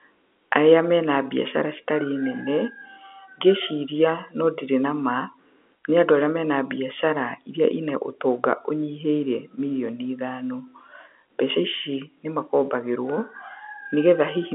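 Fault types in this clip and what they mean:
No fault types are present in this clip.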